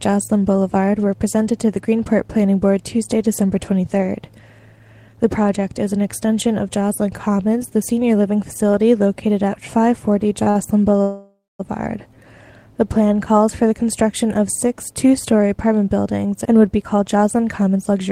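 Short stalls from a late packet at 10.43–10.48 s and 10.50–10.57 s: the jitter buffer emptied, and the last sound was held for 28 ms and then 44 ms, with nothing lost.

A call audio freeze from 11.03 to 11.61 s, likely from held-up packets, stretches the last sound into a fading buzz, ending in about 200 ms of silence before the audio resumes.

A jitter buffer speed-up from 16.18 to 18.08 s trims small pitch-period pieces, roughly 150 ms in total, so the audio runs at 108% speed with unchanged pitch.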